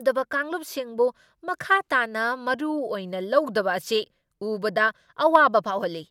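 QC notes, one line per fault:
No faults found; no dropout, noise, distortion or level problem in the speech.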